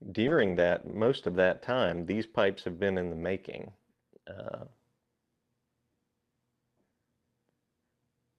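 From 0.31 s to 5.49 s the sound grows rough and dull, its top end narrowing from 20 kHz to 12 kHz, worst for about 1.6 s. This call bitrate drop starved the encoder, consistent with a fall from 96 to 18 kbps.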